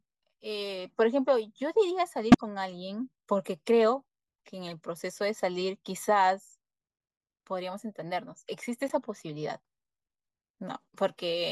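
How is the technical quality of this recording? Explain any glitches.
The recording has three short glitches, each a corrupt frame decoded: bits inside compressed frames were damaged, and the decoder played those frames anyway. Misread gains and codes pushed energy into the wrong frequencies for the length of each spoiled frame. From 2.32 to 2.41 s, a couple of frames produce a loud glitch. At 4.69 s, a single frame leaves a faint glitch. From 8.88 to 8.94 s, a few frames give a quieter glitch.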